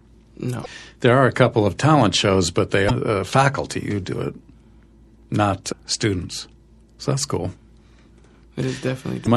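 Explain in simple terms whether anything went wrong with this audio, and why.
Two things went wrong with this speech recording.

Throughout the clip the sound is watery, with a swirly, metallic edge on hissing consonants. This is most likely MP3 compression squeezed too hard. To save space, the encoder dropped the highest frequencies and let the quieter details flicker in and out from moment to moment. Because the damage runs through the whole clip, it differs from the brief glitches described next.

Four short glitches are damaged data in a compressed stream. They come at 0.62–0.66 s, 2.86–2.91 s, 5.71–5.73 s and 9.24–9.28 s. Each is a quick glitch where part of the file was corrupted. At those points the player can't read the data, loses its place and searches for the next readable chunk. Unlike the steady compression blur, these faults are sudden, isolated and a few hundredths of a second long.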